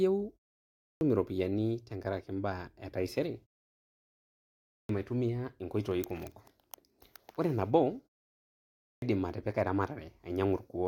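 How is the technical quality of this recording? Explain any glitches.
The main glitch is a clipped start after a pause, and it happens three times, at 0.77 s, 4.64 s and 8.78 s. Each time the speech comes back after a gap (0.47 s, 1.26 s and 0.78 s of quiet), the playback device has dropped into a sleep state and needs a moment to wake and lock again. Roughly a quarter of a second is swallowed: 0.24 s, 0.25 s and 0.24 s. The speech jumps in abruptly from silence with its opening sounds missing.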